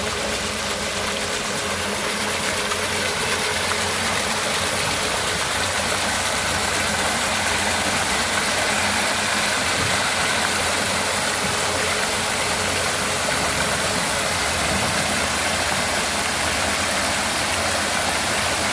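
Nothing in the audio stood out as a technical fault on listening.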